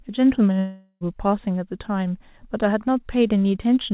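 A long network dropout runs from 0.59 to 1.04 s. The speech cuts out and its last sound is stretched into a fading buzz for 0.42 s, then brief silence, and the speech resumes with that stretch missing, likely from packets that never arrived.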